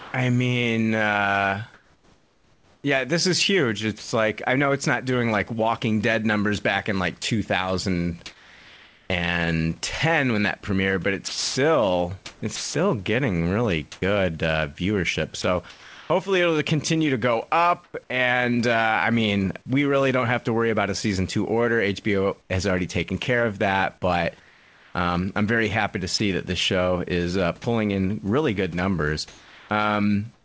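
From 0 to 4.12 s the speech is likely chopped by the voice detector. About 1.4 s of quiet edges becomes synthetic fill, so the sound stutters.

Right after "numbers back in like", at 7.22 to 7.24 s, speech is dropped by the voice detector. Its likely cause is a word ending mistaken for background. About 10 ms of speech vanishes, replaced by comfort noise.

From 7.22 to 9.10 s, comfort noise replaces the background for about 0.86 s. It likely comes from discontinuous transmission. The room hiss, about 36 dB below the speech, turns flat and featureless.

After "that premiered but it's", from 11.28 to 17.94 s, the voice detector chops the speech again. It likely swaps about 1.2 s of quiet passages for fill, causing choppy gaps.

From 22.42 s to the end, the same chopping likely replaces about 1.2 s with fill, within the call codec's 8 kHz band limit.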